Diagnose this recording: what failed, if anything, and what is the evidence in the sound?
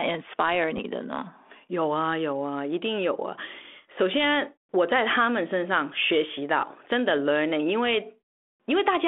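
The fault is on the transmission link: bit errors on the ADPCM link, heard as a short pop and rough burst from 0.77 to 0.80 s. The speech runs through G.726 at 32 kbit/s, with its usual 250 Hz to 3.5 kHz telephone band. A few flipped bits, on the order of a few per thousand, throw the decoder's step size and predictor off. The damage rings on for tens of milliseconds instead of being a single click, which points to a couple of corrupted frames.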